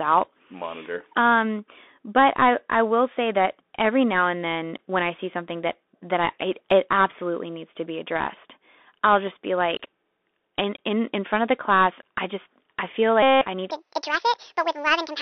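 The whole clip runs through a Bluetooth CVSD headset codec, squeezed to roughly 250 Hz–3.6 kHz, which fits a 64 kbps link, with scratchy s sounds and granular hiss plainly there.

From 13.23 to 13.47 s, after "I just I feel", there's a Bluetooth headset packet repeated run. About 190 ms of lost packets got refilled with the last one, giving a steady buzz near 267 Hz until "I need".

Right after "I need", from 13.71 s to the end, a section at the wrong speed plays 1.67 times fast, about ten semitones higher and hurried. The likely cause is a clock mismatch.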